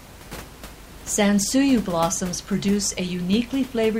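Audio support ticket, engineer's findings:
No fault found on the signal path for this speech recording. Room noise from the capture environment sits about 19 dB below the speech and belongs to the recording itself.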